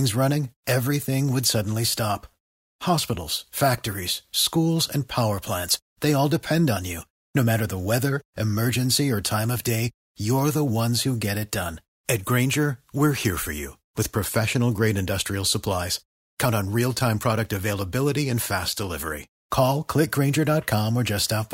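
A speech recording, and nothing in it is technically wrong. There are no moments that need a time or a cause.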